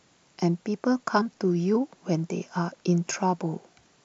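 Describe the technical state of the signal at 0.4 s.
At 0.40 s there is a block of digital silence: about 3 ms of samples drop abruptly to zero and return, producing a brief tick.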